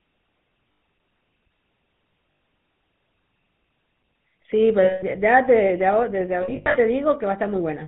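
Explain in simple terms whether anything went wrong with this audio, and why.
The whole recording went through the GSM full-rate codec, the old mobile-phone voice coder. It rebuilds the voice from a simple model driven by a coarse pulse train and drops everything above 4 kHz, so the speech sounds buzzy, gravelly and muffled throughout.

There are also four spots with lost GSM frames, where chunks of the signal never arrived and the decoder kept replaying the last good sound. You hear a brief rough, metallic ring at 0.72 s (100 ms), 2.32 s (80 ms) and 4.84 s (180 ms). Around 6.42 to 6.76 s the losses are scattered, the longest gap only about a tenth of a second.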